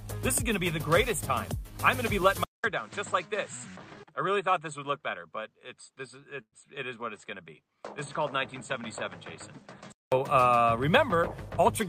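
At 2.44 s the recording's input likely switched to a poorer device, such as another microphone or a headset's call profile. There is a silence of about 200 ms at the switch. From there until 10.12 s the audio carries nothing above 8.3 kHz, so it loses its top end. It sits about 5 dB lower and has its own noise floor, roughly 50 dB below the signal. At 10.12 s the fuller sound returns.

From 6.41 to 6.54 s a call audio freeze occurs. Packets were likely held up in transit, so the receiver's jitter buffer ran dry. To cover the gap, the receiver extended the last sound for about 110 ms as a buzz or hiss that fades, with around 70 ms of silence within the stall. When the packets arrive, the audio resumes exactly where it stopped, so nothing is lost, but everything afterward runs 110 ms later.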